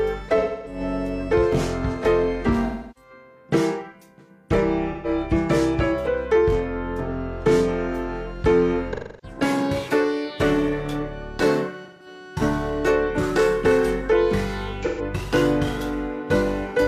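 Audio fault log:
0.39–0.80, 2.66–3.10, 4.92–5.08, 8.93–9.37, 11.84–12.07 and 14.83–15.01 s: AAC frame loss with concealment. The decoder patches each 0.13–0.3 s gap from the last good spectrum, hence those smeared, noisy, phasey blurs.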